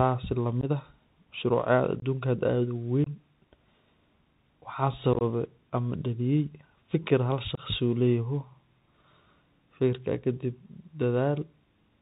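Speech that carries the Bluetooth CVSD headset codec throughout. Nothing passes above 4 kHz, s sounds are scratchy, and a granular hiss runs beneath the voice, which fits a one-bit, 64 kHz delta-modulated headset link whose adaptive step cannot keep up with loud high-frequency energy. Unconcealed Bluetooth headset packet loss punches abrupt holes at 0.61–0.64 s (about 15 ms), 2.00–2.03 s, 3.04–3.07 s, and 7.55–7.59 s just after "am daliyay fakir" (each about 22.5 ms). A chopped cluster of losses totalling about 45 ms sits at 5.13–5.22 s, just before "am daliyay fakir". Each gap is a few lost voice packets replaced by silence or an idle pattern rather than concealed.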